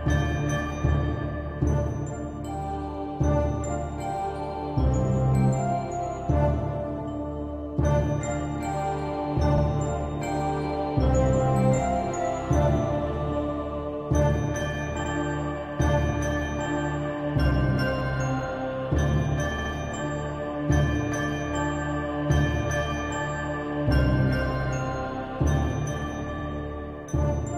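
Repeated frames: blocks of compressed audio were decoded more than once, so the sound stutters. A 46 ms stretch replays at 9.57 s, 23 ms at 11.75 s, 93 ms at 15.03 s, 70 ms twice more at 19.58 s, and 46 ms at 26.38 s.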